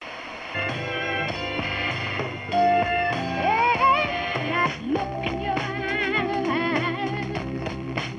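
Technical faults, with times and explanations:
No technical fault can be heard in the signal at any point.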